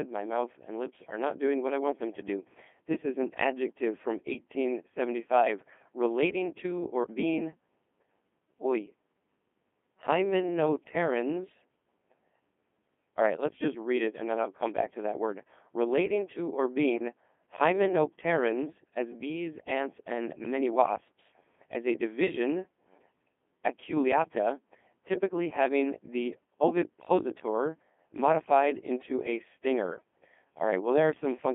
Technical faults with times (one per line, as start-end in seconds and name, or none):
0.00-31.54 Codec 2 vocoder